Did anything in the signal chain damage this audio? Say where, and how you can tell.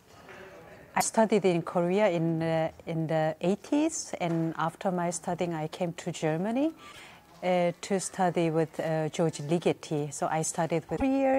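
Yes, damaged data in a compressed stream at 1.00–1.04 s, 6.90–6.99 s and 10.93–11.02 s. Those short glitches come from bad frames the decoder misreads.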